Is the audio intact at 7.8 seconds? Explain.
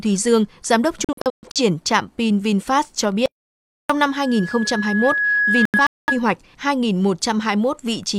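Yes, the audio is intact at 7.8 seconds, with no dropout, distortion or other fault audible at that moment.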